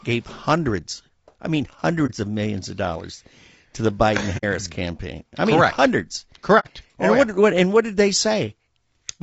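Throughout, the speech was likely squeezed through low-delay AAC compression at a low bitrate, consistent with about 32 kbps, leaving it rough and grainy with noise between harmonics. Then AAC frame loss with muting: lost frames decoded as silence, giving a brief dip at 2.06 to 2.11 s and soft-edged holes at 4.37 to 4.44 s and 6.59 to 6.67 s.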